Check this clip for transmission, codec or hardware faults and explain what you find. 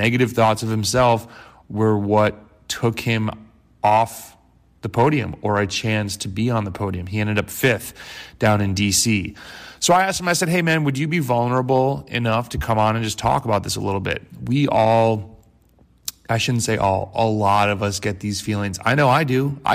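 One fault runs through the entire recording: hard clipping. The louder peaks of the speech carry a brittle crackle. The signal was pushed roughly 5 dB beyond what one stage could pass, so under one percent of samples had their tops cut flat, and those squared-off peaks add high harmonics heard as crackle.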